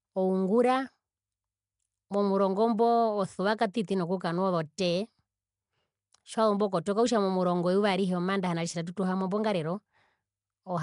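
Throughout, the speech has a rough, hissy halo and a smeared, underwater feel, with nothing above 10.6 kHz. That's likely Nellymoser compression, Flash's old codec, which gives quiet bands no bits and fills them with noise; the damage fits roughly 44 kbps.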